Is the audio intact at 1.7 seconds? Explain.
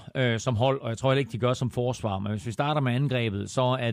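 Yes, the speech at 1.7 seconds plays through intact, with no dropout, click, distortion or other fault at that moment.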